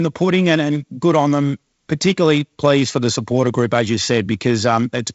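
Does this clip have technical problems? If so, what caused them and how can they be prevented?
No, no technical faults here.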